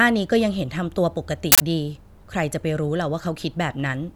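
At 1.52 s the speech is cut by an uninitialised buffer: a burst of harsh digital noise, much louder than the surrounding audio, lasting until 1.60 s. A block of about 80 ms was sent to the output before any audio had been written into it, so whatever stale memory it held was played as samples. Unlike a dropout, which leaves silence, or a single click, this fills the whole block with loud, unrelated noise.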